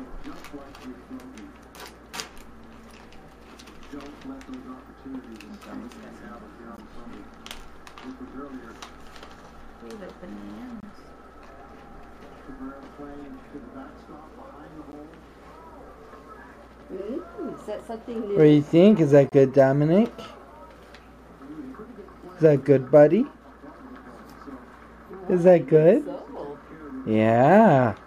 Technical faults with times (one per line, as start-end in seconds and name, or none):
6.77-6.80 corrupt frame decoded
10.80-10.85 corrupt frame decoded
14.92-14.95 corrupt frame decoded
19.29-19.33 corrupt frame decoded